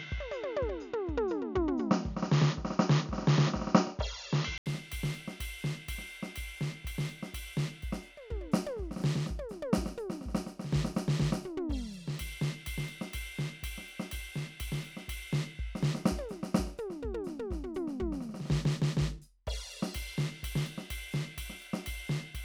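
Input switched to a poorer device, 0 to 4.66 s: the music sounds dull and boxy, with nothing above 7 kHz, faint background noise and a level a few decibels off, until an 80 ms gap where the input likely returned to a fuller device.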